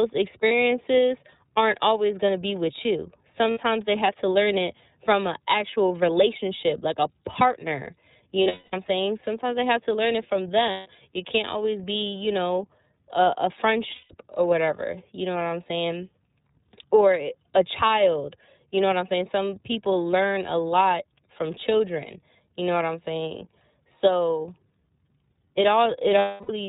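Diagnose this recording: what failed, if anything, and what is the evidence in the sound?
iLBC codec, throughout: the codec stage limits the band to 4 kHz and adds a rough, synthetic texture, which fits iLBC's 30 ms frames at about 13.3 kbps.

Lost iLBC frames, at 0.48, 3.51 (after "to be with you"), 5.88, 8.43, 10.71, 13.95 and 26.19 s: network losses of 30 to 270 ms are filled with a repeated pitch cycle plus noise. Each gap sounds like a buzzy held vowel, then the sound recovers at once.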